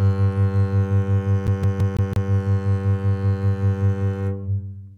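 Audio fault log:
1.47 to 2.30 s, CD stuck on one turn: a scratch on the disc knocks the laser back by one track at the same point on each revolution, so the player keeps rereading the same spiral segment instead of moving on. The music locks into a loop about 0.17 s long that repeats five times, with a brief mute at every jump back, producing the rapid, evenly spaced stutter of a skipping CD before playback carries on.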